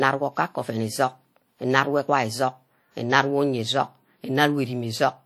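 WMA compression, throughout the speech: a transform codec, likely WMA, smears quantisation noise across tens of milliseconds and discards weak spectral lines, giving a ringing, washy sound with hiss that breathes with the signal. The damage is plainly audible, which fits about 48 kbps, though content still reaches 20.1 kHz.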